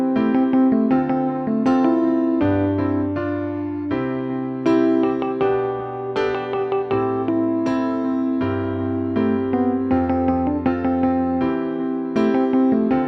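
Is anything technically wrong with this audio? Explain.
No, nothing in this audio points to a technical problem, as the signal holds steady and intact throughout.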